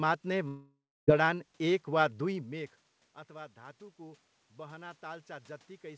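Speech over a call link. From 0.48 to 1.09 s the audio breaks up. The last sound drags on as a fading buzz, then goes silent for about 0.28 s. About 0.6 s of speech is lost, and the audio resumes at "जडान एक वा". This is likely a long network dropout. From 3.26 s to the end there is automatic gain rising. The input level fell by about 20 dB. The gain control then lifts voice and room noise together, gradually, over several seconds.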